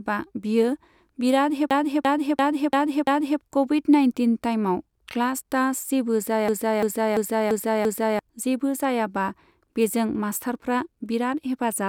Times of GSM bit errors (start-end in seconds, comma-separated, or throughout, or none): none